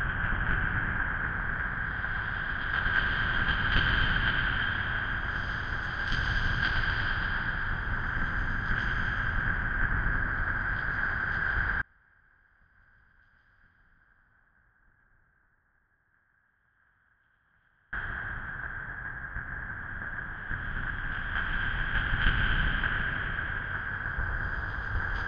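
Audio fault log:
11.82–17.93 s: audio dropout to a faint residue. The sound cuts off abruptly and returns just as suddenly about 6.1 s later. Throughout the gap only a faint leak of the sound remains, roughly 35 dB below its normal level, most likely because the signal was lost while the path after the break stayed live. On a waveform the envelope collapses to a thin sliver with sharp edges at both ends; a spectrogram shows a dim band bounded by vertical cut lines.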